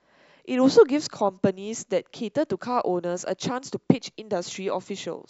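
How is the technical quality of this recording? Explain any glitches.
No glitches or technical faults are audible anywhere here.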